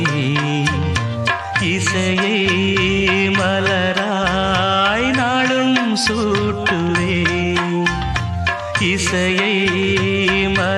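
Nothing stood out on listening to this clip.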